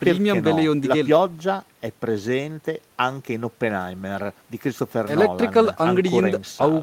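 Speech recording with no technical faults detected anywhere in the clip.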